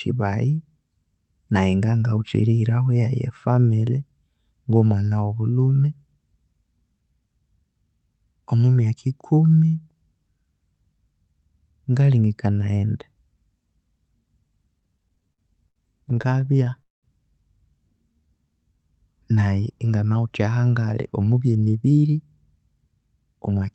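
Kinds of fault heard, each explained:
Repeated stalls (stutter): From 14.79 to 16.80 s the sound keeps catching and restarting. About twenty brief gaps, none longer than 75 ms, are each filled by continuing the last sound, adding about 334 ms in total while nothing is lost. Late-arriving packets keep draining the jitter buffer. Unlike a single freeze, this is a rapid chain of tiny holds, giving a choppy, dragging texture rather than one clear pause.
Call audio freeze: Right after the stutter, from 16.82 to 17.05 s, the sound stops once for about 209 ms. The last sound is stretched and fades, leaving about 160 ms of silence, and then the audio resumes exactly where it left off with nothing skipped. The likely cause is packets held up in transit until the jitter buffer ran dry. It differs from the stutter because it is one sustained hold that fades to silence, not many short catches.
Jitter buffer slow-down: From 18.09 to 18.83 s the audio plays at about 85% speed while the pitch stays the same. 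The receiver repeats single pitch periods or small bits of pauses over and over to rebuild its reserve, adding about 122 ms. Sounds are drawn out. Unlike a freeze or stutter, there is no stop or gap. The audio flows continuously but stretched, and any tape-style drop in pitch is absent.
Jitter buffer speed-up: From 20.71 s almost to the end, at 23.62 s, the speech runs at about 109% speed with unchanged pitch. The receiver trims short pieces of one or a few pitch periods again and again to shed excess delay, removing roughly 0.3 s overall. It sounds hurried, the opposite of the slow-down's stretching. Because the pitch stays put, it is distinguishable from simple fast playback, which would also raise the pitch.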